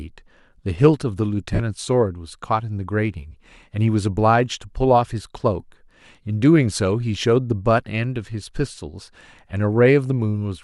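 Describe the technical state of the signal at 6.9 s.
At 6.9 s the signal is intact, with no technical fault audible at that moment.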